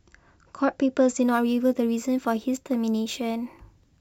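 From 1.22 s to the end, a gritty, inharmonic fizz tracks the speech about 30 dB down. This is crude rate conversion, likely 32 kHz to 44.1 kHz by repeating samples without filtering.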